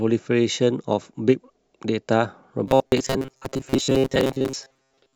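Speech clip, with robotic sound from repeated short buffers from 2.67 s through to the end. The voice collapses into a rigid metallic buzz at 133 Hz that still loosely tracks the speech. That pitch points to a segment of roughly 7.5 ms being replayed, likely because audio was arriving too slowly and the playback side filled the gaps by repeating the last buffer, so roughly two thirds or more of the real signal in that stretch is skipped.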